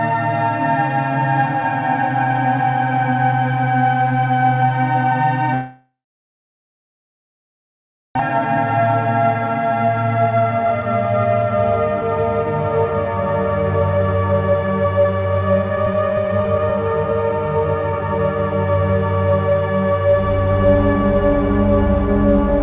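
From 5.54 to 8.21 s the sound breaks off in what is likely a long network dropout. A fading buzzy continuation gives way to about 2.2 s of silence, a flat gap on the waveform and a blank spectrogram band, and about 1.6 s of audio never returns.

A jitter buffer speed-up follows from 8.29 to 10.86 s. The audio runs at about 121% with unchanged pitch and sounds hurried, as the receiver trims roughly half a second of pitch-period slices to drain the backlog. The spectrogram shows compressed timing, but harmonic spacing stays the same.

A second, milder jitter buffer speed-up runs from 13.80 to 18.00 s at about 109%, removing roughly 0.4 s. The rushing is subtler here. Throughout, the spectrogram shows nothing above 4 kHz, which fits a G.711 mu-law call path at 64 kbps.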